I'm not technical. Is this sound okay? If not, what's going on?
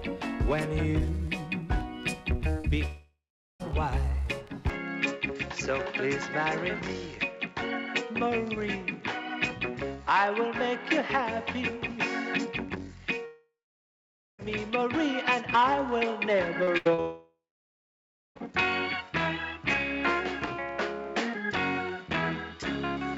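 No. There are four kinds of problem here, all of them the sort of trouble you get on an internet call.

At 2.61 to 2.66 s there is a tiny smear or wobble, a short concealed packet loss. A few hundredths of a second of audio arrived too late, so the receiving end quickly invented a stand-in by stretching the sound just before it, then joined back onto the real audio.

Three times the sound breaks off: at 2.86 to 3.61 s, at 13.25 to 14.40 s, and at 17.00 to 18.37 s. Each time you hear a buzzy or hissy continuation of the last sound that fades away, then a stretch of near silence, and the audio resumes further along with a piece missing. This is a long network dropout, most likely the connection stalling so that nothing came through for up to about 1.4 seconds. The receiver can only fake a short tail before giving up.

From 4.70 s to the end the sound turns duller, losing its brightness and crispness, though the loudness stays about the same and there is no pause at the change. 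The likely cause is the input switched to a poorer device, such as a different microphone or a headset dropping into its lower-quality call mode, which cuts off the highest frequencies, above about 7.6 kHz.

Just before the last dropout, from 16.63 to 17.00 s, the sound goes choppy and robotic. This is repeated packet loss. Three small gaps arrived in quick succession, the longest 80 milliseconds, and each was patched over. Close to half of that short stretch is filler rather than real sound.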